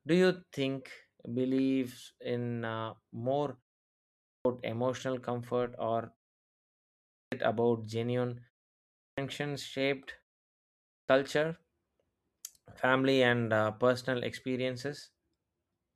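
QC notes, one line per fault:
4.18 s, 7.08 s, 8.93 s and 10.84 s, clipped start after a pause: the output path sleeps during silences of 0.5 to 1.0 s and wakes late, so each first sound after the pause loses 240 to 270 ms and starts abruptly.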